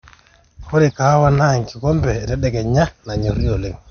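Throughout the speech, the treble stops abruptly around 6.5 kHz and the sound carries a plainly audible watery, swirling texture with smeared attacks. This is likely MP3 compression at a low bitrate, roughly 48 kbps, where weak frequency components drop in and out between frames.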